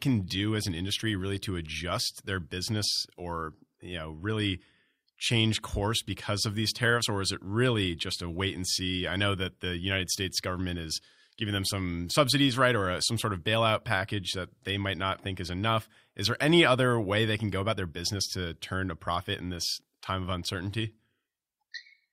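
Speech recording, no technical faults detected anywhere in the clip.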